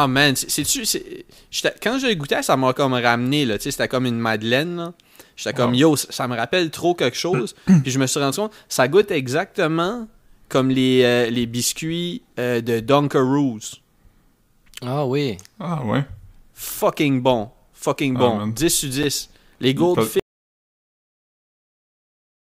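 A gap between chunks occurs at 9.02 s, just after "suis rendu compte ça" and before "exactement comme les euh", and again at 19.03 s. Each is a hole of about 7 ms with abrupt edges, cut cleanly into the speech. The two sit exactly 10 s apart, which points to the audio being handled in 10 s blocks, with a sliver of silence inserted at each join, perhaps padding or a late chunk start. Nothing is missing, but each join is heard as a brief hole.

An audio dropout to silence begins at 20.2 s and runs to the end of the clip. The speech stops mid-flow, and the remaining two seconds or so are dead digital silence with no room tone underneath. The likely cause is that the input signal was lost, through a disconnection or an unintended mute, while recording carried on writing silence, so whatever followed is gone entirely.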